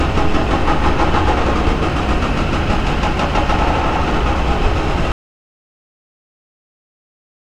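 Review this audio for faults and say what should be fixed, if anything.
Audio dropout to silence begins at 5.12 s and lasts to the end at 7.45 s. The sound cuts off abruptly and does not come back. The gap is silent with no room tone. The input was likely lost, through a loose connection, a failed link or a stray mute, while silence kept being written. Whatever sounded in those final 2.3 s is gone and must be recorded again.

To prevent it, secure all connections and watch input meters throughout recording so any lost signal is caught immediately.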